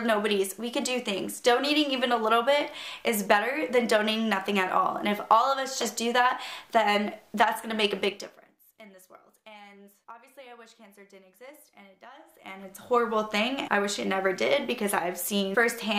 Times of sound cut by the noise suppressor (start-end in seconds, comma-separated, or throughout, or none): none